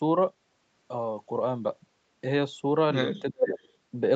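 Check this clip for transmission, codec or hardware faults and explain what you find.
Two call-processing faults show up near the end of the speech, both packed into the last second.

From 3.22 to 3.58 s the voice sinks, dropping by roughly 20 dB at its deepest over about a third of a second. That's likely speech suppressed in double talk: the echo canceller couldn't tell the near talker from loudspeaker echo and turned everything down.

Right after, from 3.58 to 3.69 s, there's a brief echo leak, a faint ghost of the voice arriving 390 ms late at roughly 35 dB below the speech. The loudspeaker side's canceller likely let a scrap of its loudspeaker pickup slip back through.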